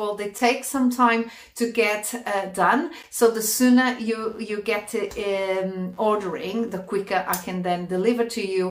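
Between 4.18 and 6.74 s, a buzzing, chirping layer sits under the sound, pulsing at around 100 times a second and roughly 35 dB below it. This is computer activity noise: load changes in the processor, graphics card or mouse disturb the ground the audio circuit shares. Unlike mains hum, which holds a steady tone throughout, it appears and stops abruptly with the machine's activity and ignores what the sound itself is doing.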